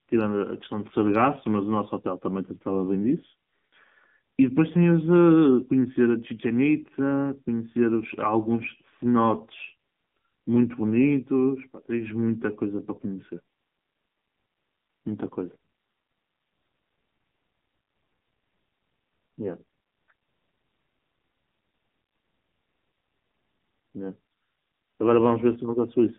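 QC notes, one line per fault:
throughout: AMR narrowband mobile codec at about 7.4 kbps, band limited to 150 Hz–3.5 kHz; voice sounds buzzy and synthetic, spectrogram shows a hard ceiling with nothing above.
8.58–8.69 s: AMR bit errors over a 0.11 s stretch, five frames' worth; corrupted pulse and gain values make a scratchy, gargly burst, seen as smeared, ragged harmonics in the spectrogram.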